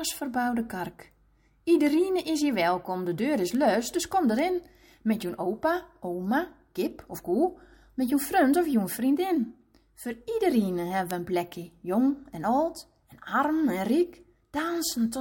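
Word clock ticks run from 0.19 s to 14.45 s, sharp clicks about once a second, where an unlocked receiver clock drifting by some tens of ppm drops or repeats a sample.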